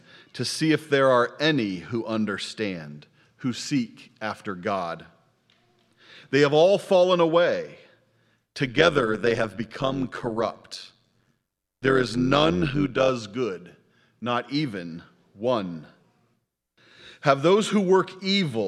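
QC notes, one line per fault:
8.66 to 13.1 s: overlap-add ripple. The audio was split into windowed frames and rejoined with an overlap whose windows don't sum to a steady gain, so the level dips and swells once per frame, by about 11 dB at a rate of around 100 Hz. The result is a metallic buzz with extra tones around each note. Unlike mains hum or buzz, no separate tone is added. The existing sound is chopped in level at the frame rate, and the ripple stops at 13.1 s.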